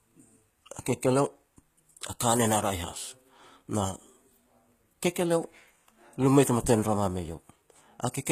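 The encoder has likely used HE-AAC compression at a low rate, which fits a bitrate near 20 kbps, for the whole clip. Only the lower spectrum is properly coded, and the treble is rebuilt by copying lower bands upward under a coarse envelope. The damage is plainly audible: the speech keeps a rebuilt top, but its s sounds come out gritty, metallic or lispy, and there is nothing above 14.9 kHz.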